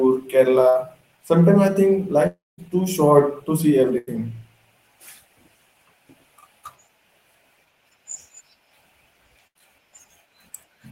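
At 0.69 to 0.77 s a burst of packet loss occurs. A short run of packets never reached the player, which covered the hole by extending the last sound and fading it. About 60 ms of speech is gone, patched by a 55 ms decaying fill before the voice picks up further along. From 2.27 to 2.60 s, right after "I think", the last sound is held and fades over roughly 310 ms, with about 210 ms of it dead silence. It then resumes at "too short to see", with about 320 ms of speech missing. This is likely a long network dropout, where the connection stalled and concealment ran out. Just after "too short to see", at 3.98 to 4.09 s, a second burst of packet loss removes about 100 ms and leaves a 92 ms fading smear. A third, at 9.47 to 9.57 s, drops about 80 ms behind a 78 ms decaying fill.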